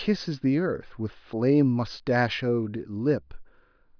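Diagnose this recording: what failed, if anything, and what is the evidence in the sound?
Nothing in the recorded speech stood out as a fault on listening.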